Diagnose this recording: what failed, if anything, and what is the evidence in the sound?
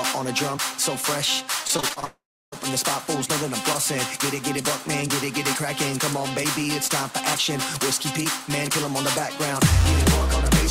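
The network is where things broke. From 1.67 to 2.04 s there's repeated packet loss with that choppy, robotic sound: about six short holes, none longer than roughly 22 ms. Each one gets papered over by stretching the last bit of sound, so about 29% of that stretch is concealment rather than real audio. The patches come so close together that the sound turns robotic and gappy instead of just clicking once.

It then goes straight into a long network dropout from 2.04 to 2.60 s, likely the same link giving out completely for about half a second. You hear the concealment smear the last sound into a fading buzz, and then roughly 0.3 s of near-silence before the audio picks up again. That missing chunk never plays, so the sound resumes further along with nothing to bridge it.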